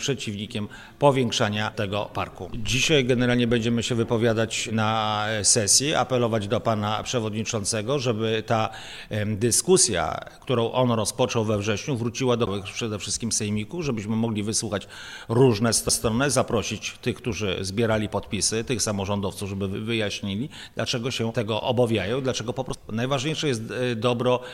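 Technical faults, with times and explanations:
12.46 s, 15.89 s, 22.74 s: CD skip. Each time, the laser jumps to another turn of the spiral, the output mutes for roughly 10 ms or less, and playback resumes from a different point on the disc.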